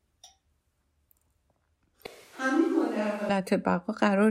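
From 2.06 s to 3.30 s the speech abruptly turns roomy and hollow, loses low end and drops by roughly 10 dB, with room noise audible about 30 dB below it, then snaps back. The cause is likely a switch to a distant microphone.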